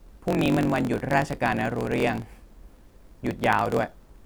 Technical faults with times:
0.00-4.26 block size mismatch (truncated)

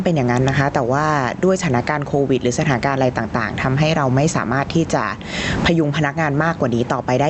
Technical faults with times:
0.00-7.29 gain pumping

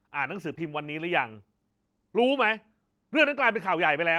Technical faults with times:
0.47-0.61 lost packet rebuilt from error correction
0.55-0.59 short concealed packet loss

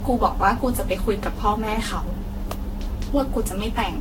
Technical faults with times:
0.00-4.01 generation loss
2.51 electrical switching spike

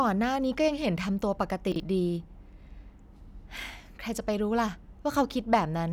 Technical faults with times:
1.72-1.80 chunks out of order

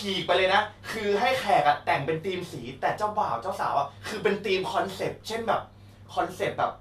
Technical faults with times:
none

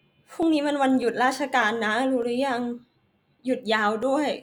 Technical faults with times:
0.43-4.03 clock drift buffer slips

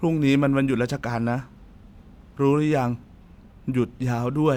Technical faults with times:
none

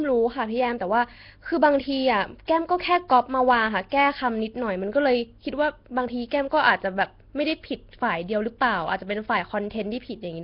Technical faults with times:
0.00-10.44 Nellymoser compression

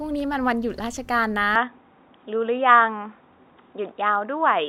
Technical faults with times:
1.56-4.68 input switched to a poorer device

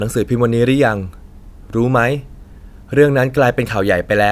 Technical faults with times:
none

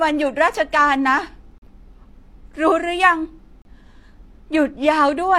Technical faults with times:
1.58-1.62 gap between stream segments
3.62-3.65 gap between stream segments

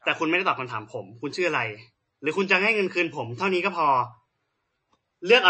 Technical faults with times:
0.00-5.49 MP3 compression

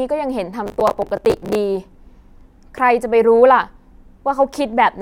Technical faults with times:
0.66-1.55 processor overload crackle

